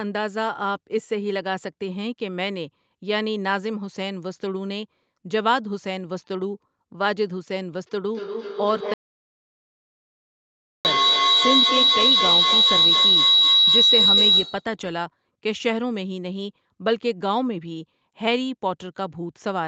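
A speech recording with a feedback howl from 8.11 to 14.8 s: a ringing tone near 4 kHz, pulsing about every fifth of a second and peaking about 7 dB above the speech, shows as a bright horizontal line on a spectrogram. Inside it, an audio dropout to silence from 8.94 to 10.85 s leaves a flat zero line on the waveform for 1.91 s, likely from lost input.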